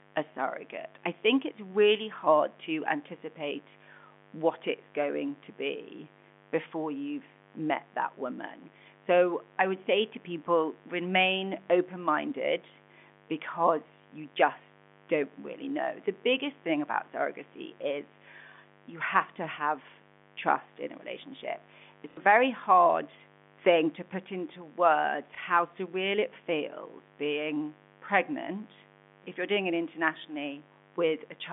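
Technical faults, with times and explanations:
throughout: mains buzz. A steady, raspy 50 Hz buzz sits roughly 25 dB below the speech. Sharp switching spikes from a dimmer, rectifier or poorly shielded cable arrive twice per mains cycle, so harmonics stack well up into the narrow telephone band.
22.11–22.17 s and 25.35–25.38 s: packet loss with last packet repeated. Audio drops out for 60 ms just before "very hard thing to" and for 30 ms between "to put into words" and "surreal it feels being". The receiver replays the last packet, and the longer gap stutters robotically, consistent with 30 ms packets.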